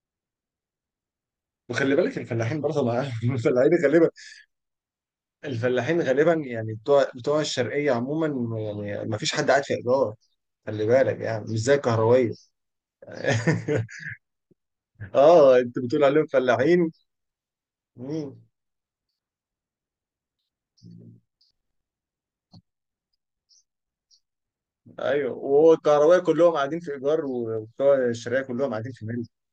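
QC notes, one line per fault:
No faults heard in this speech recording.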